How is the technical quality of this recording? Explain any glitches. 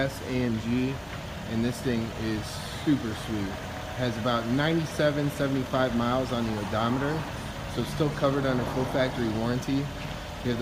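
No glitches can be heard anywhere in the recording. Nothing in the audio shows a technical fault.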